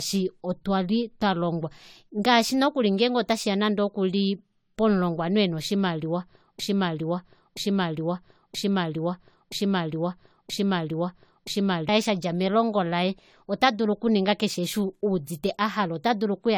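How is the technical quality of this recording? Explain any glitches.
The recording has two clear technical faults: lossy-codec degradation throughout and a stuck repeating segment in the middle.

Generation loss runs through the whole clip. It was likely caused by about four lossy re-encodes, consistent with AAC-LC near 64 kbit/s. Stacked quantisation sounds swirly and hollow, with smeared attacks and nothing above 19.3 kHz.

A broken-record loop runs from 6.59 to 11.89 s, after "pomulongwanhu ena oshimaliwa". A 0.98 s fragment repeats back to back, likely from a stalled stream resending its buffer. Audio is lost until "shadja melongo laye ota".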